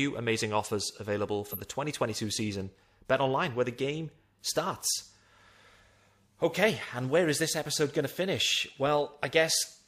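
At 1.51 to 1.59 s, just after "amazing offers available", a corrupt frame was decoded: flipped bits in roughly one compressed frame misplaced energy, producing a brief chirp-like burst peaking around -20 dBFS.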